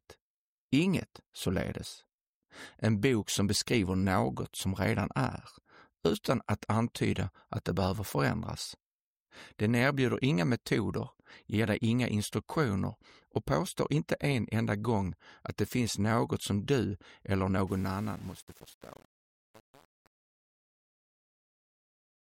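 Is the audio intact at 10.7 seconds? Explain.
Yes, the audio is intact at 10.7 seconds, with no fault at that moment.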